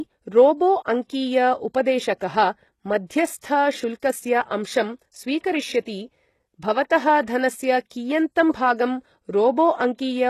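From start to finish the speech carries plainly audible codec damage, most likely from HE-AAC compression at a very low bitrate, consistent with about 16 kbps. Only the lower spectrum is coded properly; the treble is rebuilt by spectral band replication, copying lower bands upward under a coarse envelope. The result sounds synthetic, with harmonics misaligned across the crossover, and s sounds turn gritty, metallic or lispy. Nothing is present above 12.3 kHz.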